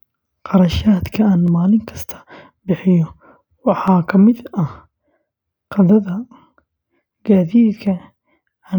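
Dropped samples at 1.48 s and 3.88 s in this speech recording produce two sharp single clicks, likely where a fraction of a millisecond went missing and the waveform jumped abruptly.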